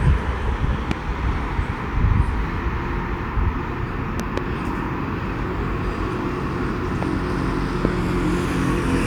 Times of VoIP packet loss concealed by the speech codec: none

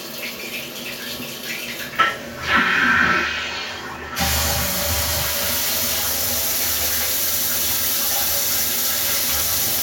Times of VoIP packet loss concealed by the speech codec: none

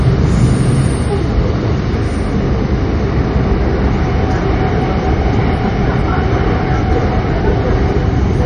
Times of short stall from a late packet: none

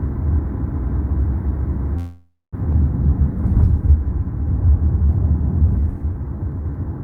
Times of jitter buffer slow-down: 3.10-6.72

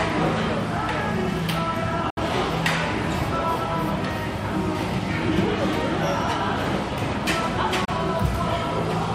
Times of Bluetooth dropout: 2.10-2.18, 7.85-7.88

